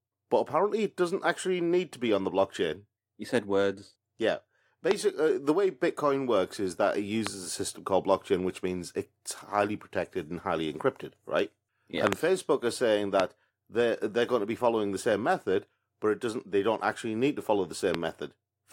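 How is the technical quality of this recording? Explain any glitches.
The recording is marred by five loud pops, one of them a double.

A sudden voltage step, likely from a static discharge, a loose connection or a driver glitch, was added to the signal, and the following circuitry turned each step into a brief pulse. The result is sharp pops roughly 20 dB above the speech at 4.91–4.93 s, 13.20–13.22 s and 17.95–17.97 s, a somewhat softer pop at 7.27–7.29 s, and two pops in quick succession at 12.07–12.15 s. Each sits on top of the speech, which continues underneath.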